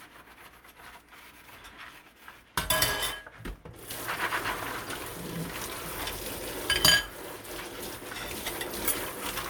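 No technical faults can be heard anywhere in the recording.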